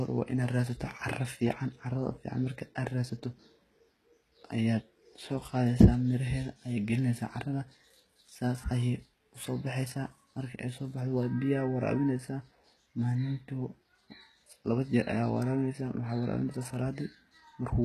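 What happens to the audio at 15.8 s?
At 15.8 s, as across the whole clip, the speech has that gritty, lispy treble of likely HE-AAC compression, with nothing above 12.3 kHz. Copied-up bands replace the real highs, which fits a bitrate near 16 kbps.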